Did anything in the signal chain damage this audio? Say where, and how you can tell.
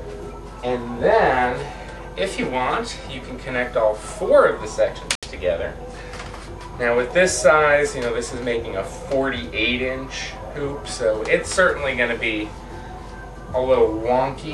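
Yes. There is a Bluetooth stall at 5.15 to 5.26 s, where the audio cuts to 73 ms of silence and then carries on. The likely stage is the wireless playback link: held-up packets let the headphones' buffer run dry, and playback paused until resent data arrived.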